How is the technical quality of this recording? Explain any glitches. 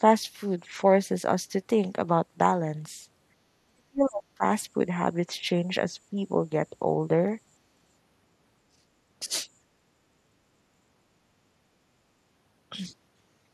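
The recording has two kinds of echo-canceller fault, both in the first ten seconds.

Speech suppressed in double talk occurs at 3.68–4.88 s, 5.26–6.18 s, 8.74–8.84 s and 9.26–9.32 s. The cause is likely an echo canceller that could not tell the near talker from loudspeaker echo while both sides spoke, so it attenuated everything. The first stretch is the worst, with the speech pulled down nearly to silence for well over half a second. The second is only a shallow dip of a few decibels. The last two are brief bites of roughly 15–20 dB.

Background gated by the echo canceller occurs at 9.71–9.81 s. The canceller clamped the microphone down while the loudspeaker was active, then released it. The room tone sinks by about 7 dB for under a tenth of a second and comes straight back. It is heard as a short hole in the background rather than a cut in the speech.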